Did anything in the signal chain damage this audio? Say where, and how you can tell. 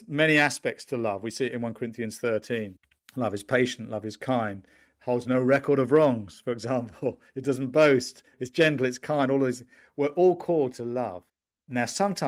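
No, no signal chain damage.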